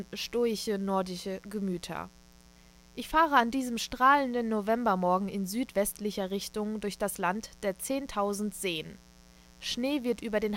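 From start to finish there's a mains buzz under the speech, built on 60 Hz. Sharp switching spikes on the supply get in twice per cycle, stacking harmonics well up into the kilohertz range, so it's a raspy edge rather than a soft hum, sitting roughly 30 dB below the talker.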